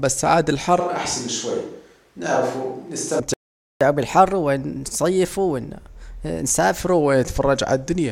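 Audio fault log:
0.80–3.20 s, switch to a distant microphone: the sound turns hollow and roomy, with thinner bass, a level drop of about 5 dB and room noise about 35 dB below the speech, likely because the close microphone dropped out. The waveform shrinks; the spectrogram shows weaker low frequencies, smeared reverberant tails and a raised noise floor between syllables.
3.34–3.81 s, playback stall: the sound cuts off mid-flow for 471 ms, likely because the player ran short of data, then resumes where it stopped. On the waveform this is a flat line. On the spectrogram it is a clean blank column with hard edges.
3.81–6.81 s, catch-up at higher speed: the backlog plays 1.1 times faster through resampling, so pitch rises by about one and a half semitones and everything sounds slightly hurried, then snaps back to normal at 6.81 s. The spectrogram shows harmonics shifted upward and syllables compressed in time.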